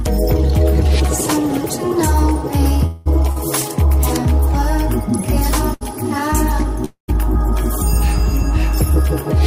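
From 2.86 to 3.08 s the last sound hangs on as a fading buzz for about 0.19 s, then the audio resumes exactly where it stopped. This is a call audio freeze, likely from packets delayed in transit emptying the jitter buffer; nothing is lost, only a gap inserted. Shortly after, at 3.32–3.38 s, and again at 5.73–5.83 s, a sound is briefly held too long with a slight buzz, 44 ms and 74 ms respectively. These are short stalls from a late packet, the receiver stretching audio until it arrived. From 6.85 to 7.10 s a second call audio freeze stretches the sound for about 0.23 s, including 120 ms of silence, again likely from a buffer starved by delayed packets.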